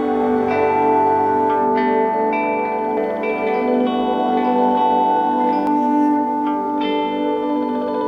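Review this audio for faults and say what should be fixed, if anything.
A second copy of the music is likely being mixed in through a slower capture path or from an edit that left two copies out of step, producing a doubled audio track from 2.97 s to 5.67 s. Over that span the full-band music is heard twice, the trailing copy about a second behind and roughly as loud as the original, with no decay or room colouring. It cuts in and out abruptly at both ends. To prevent it, route the music through a single capture path and check edits for stray overlapping copies before mixdown.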